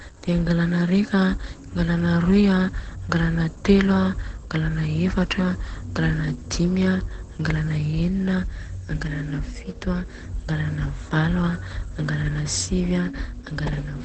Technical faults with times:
0.00-14.04 Opus compression

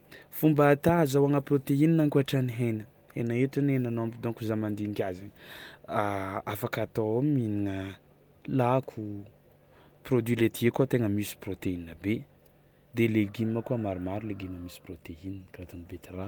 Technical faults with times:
none

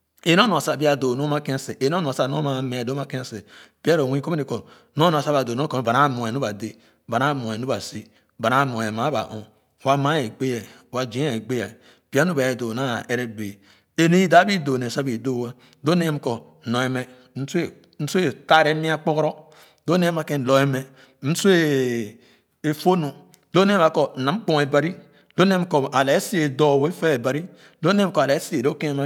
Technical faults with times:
none

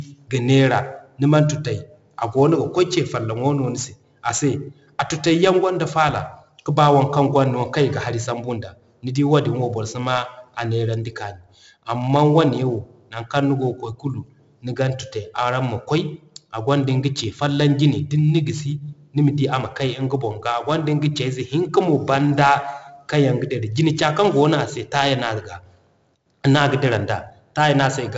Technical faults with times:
0.00-28.17 4-bit ADPCM compression

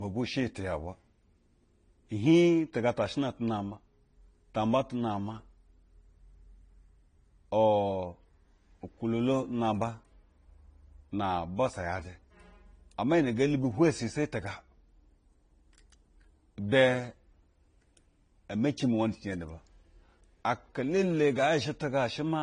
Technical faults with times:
0.00-22.42 transcoding between lossy codecs

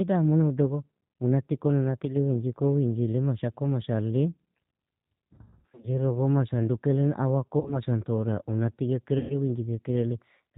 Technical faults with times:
0.00-10.57 G.729 codec
5.33-5.92 VoIP packet loss concealed by the speech codec
7.60-7.79 VoIP packet loss concealed by the speech codec
9.18-9.36 VoIP packet loss concealed by the speech codec

